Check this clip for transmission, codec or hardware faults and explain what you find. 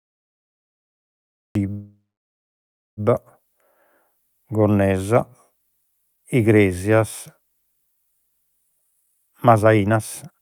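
Three faults are audible in this speech clip: a cut-off start, a call audio freeze, and a jitter buffer speed-up.

Cut-off start, 0.0 to 1.55 s. The clip opens on digital silence, and speech enters at 1.55 s already mid-sound, with no rising attack. Capture or the stream clearly began after the talker did, so the opening of that sound is lost. On a waveform this is a dead-flat line that jumps straight into the sound. A spectrogram shows blank space ending in a sharp vertical edge, where any click appears as a thin broadband stripe.

Call audio freeze, 1.71 to 3.0 s. The sound stops advancing and the last fragment is stretched into a buzzy, fading tail, which then drops to about 0.98 s of silence before speech resumes exactly where it left off. Nothing is lost, but about 1.26 s of gap has been inserted, adding that much delay. The likely cause is delayed packets draining the jitter buffer. 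A spectrogram shows frozen horizontal bands fading into an empty block.

Jitter buffer speed-up, 8.69 s to the end. Speech runs at about 126% speed with pitch unchanged, so it sounds rushed. Roughly half a second of audio was trimmed in many tiny pitch-period slices to shed excess buffered delay. On a spectrogram, harmonic spacing stays normal while syllables and pauses look compressed in time. The waveform shows unchanged cycles with shortened gaps.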